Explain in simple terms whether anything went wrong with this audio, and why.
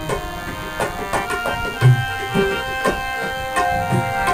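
A cordless DECT phone or its base station close to the recording gear sends a short radio pulse 100 times a second, and the audio circuit turns those pulses into sound. The result is DECT cordless phone buzz: a thin, steady buzz, well below the main sound, running through the whole clip.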